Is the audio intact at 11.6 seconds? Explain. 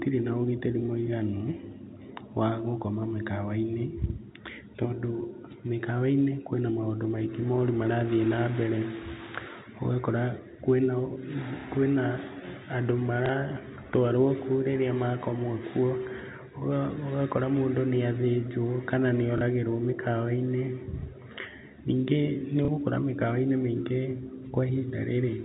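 No. From 11.61 to 11.64 s a small blip breaks the speech. This is packet loss with the last packet repeated: about 30 ms went missing, which fits a single lost packet, and the receiver replayed the previous audio.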